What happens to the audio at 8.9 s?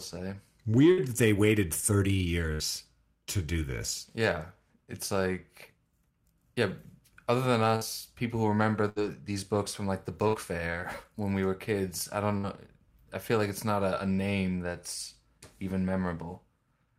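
A burst of packet loss hits at 8.89 s, running to 8.99 s, just after "people who remember" and before "these books from like". Several packets in a row failed to arrive in time, so the receiver stretched the last bit of speech it had across about 67 ms, fading it down as a brief held buzz or hiss. When audio returns, roughly 60 ms of the original speech has been skipped, giving a small jump into the next phrase.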